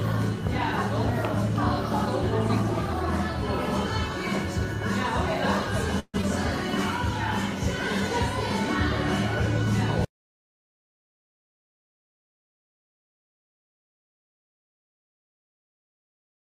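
At 5.99 s the sound stops moving forward and the receiver stretches the last moment into a fading buzz for about 0.16 s, ending in roughly 40 ms of silence before normal playback returns at 6.16 s. This is a call audio freeze, likely caused by packets held up in transit until the jitter buffer ran dry. Nothing is lost. The audio resumes where it stopped, now 142 ms later than before.

Right after, at 6.22 to 6.25 s, comes a short concealed packet loss. About 40 ms of the stream never reached the decoder. Only around 12 ms of that gap is patched with a continuation of the preceding sound, heard as a quick smear or wobble, and the rest is dropped. Skipping that audio pulls the delay back by roughly 30 ms.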